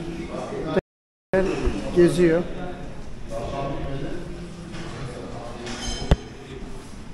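At 0.79 s the sound cuts off abruptly, mid-flow, and for 0.54 s there is total silence, with no room tone or background hiss underneath, before it snaps back in at 1.34 s. That dead-flat gap is an audio dropout to silence: the input signal was likely lost for that stretch, through a disconnected device, a failed link or a mute, while the recording went on writing silence, so whatever sounded in that half-second is simply gone.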